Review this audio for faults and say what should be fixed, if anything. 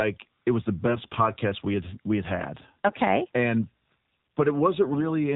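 AMR narrowband mobile codec, throughout: the speech passed through an 8 kHz AMR-NB encoder, so nothing above 4 kHz survives. The thin, buzzy, synthetic tone fits a low mode of about 7.4 kbps. To prevent this, carry the call over a wideband codec, or at least use a higher AMR mode.

AMR bit errors, from 0.86 to 1.19 s and from 4.94 to 5.12 s: a weak radio link flipped a few percent of the less protected frame bits. This misplaced the excitation pulses and skewed the gain values, turning the voice hoarse and gargly. To prevent this, improve link quality or apply stronger error protection to those bits.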